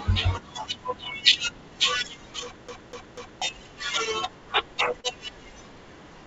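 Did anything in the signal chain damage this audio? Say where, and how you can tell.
Yes. At playback, a CD stuck on one turn. From 2.68 to 3.42 s, the same 246 ms of speech repeats three times, with a brief mute at each jump.

On the network, short concealed packet loss at 5.00 s. About 30 ms never arrived. The decoder stretched the preceding sound across the gap, leaving a brief smear.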